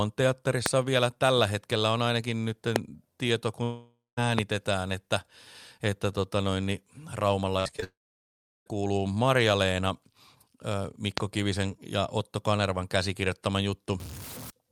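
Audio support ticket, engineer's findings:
Loud pop at 0.66 s (just before "vielä tällä hetkellä on"), 2.76 s (after "hetkellä on ainakin nyt"), 4.39 s and 11.18 s. Single sharp transients, about 25 dB over the signal (about 20 dB at 4.39 s), audio continuing underneath. Likely a voltage step from a plug, switch, static or driver glitch, shaped by downstream circuitry.

Long network dropout at 3.63–4.19 s, after "on ainakin nyt tieto", and 7.84–8.68 s. Receiver stretches the last sound into a fading buzz, then near-silence (about 0.19 s, then about 0.73 s) before audio resumes, with about 0.54 s and 0.82 s lost. Likely stalled packet delivery.

Repeated packet loss (robotic sound) at 7.41–7.84 s, running straight into the second dropout. Six gaps, longest 54 ms, about 31% of the span concealed by repeating the previous sound. Choppy texture with fragments missing. Network jitter/loss on the receive path.

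Stuck bit at 14.00–14.50 s. Added noise and distortion. Likely one data bit held at a fixed value by a broken line or converter, so roughly half the samples are offset by that bit's weight in a waveform-dependent pattern.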